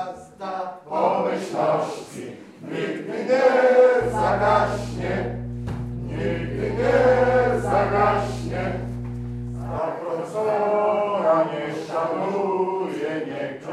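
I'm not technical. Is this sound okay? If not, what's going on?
No. From about 4.01 to 9.79 seconds there is mains hum: a steady, low droning tone at 60 Hz, fairly loud next to the sound itself. It comes from the power line leaking into the recording, likely through a ground loop or a nearby transformer. Unlike wind rumble or handling noise, which wobble and shift, this hum holds one unchanging pitch the whole time, then stops.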